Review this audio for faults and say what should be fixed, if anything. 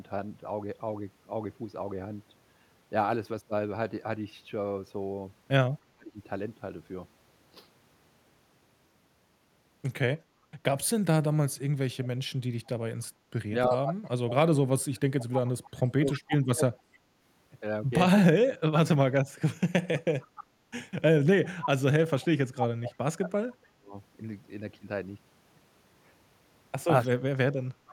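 Speech suppressed in double talk occurs four times: 5.83 to 6.18 s, 13.69 to 18.62 s, 22.14 to 23.95 s, and 27.08 s to the clip's end. The speech sinks by roughly 40 dB in the first two and about 35 dB in the last two. The likely cause is an echo canceller facing both talkers at once. It cannot separate the near voice from loudspeaker echo, so it turns both down.

An echo leak is heard from 12.66 to 16.34 s, 19.99 to 21.66 s, and 27.04 to 27.08 s. A delayed copy of the speech trails it by 297 ms. It sits roughly 15 dB, 10 dB and 25 dB below the speech in those three stretches. The far end is likely playing the call on a loudspeaker. Its canceller misses part of what its microphone picks up, and that residue is sent back.

Background gated by the echo canceller occurs from 13.13 to 13.31 s. The room sound drops by about 8 dB for roughly 200 ms, then comes back. The canceller has clamped the microphone hard while the loudspeaker was playing. 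This gap falls inside the first echo leak. The background dips briefly. When the canceller releases, the room tone returns.

To prevent these, the far end should use a headset or better acoustic isolation, and the echo canceller should be tuned for gentler double-talk handling, fuller echo removal and softer gating of background sound.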